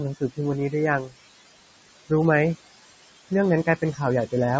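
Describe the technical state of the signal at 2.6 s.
A noise suppressor is running across the whole clip, including 2.6 s, pulling down bands it treats as steady noise by about 20 dB frame by frame. The room noise, about 14 dB below the speech, pumps between words.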